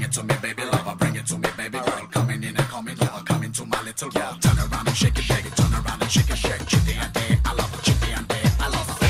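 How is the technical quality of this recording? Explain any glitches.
No glitches can be heard anywhere in this recording. There are no interruptions or disturbances to explain.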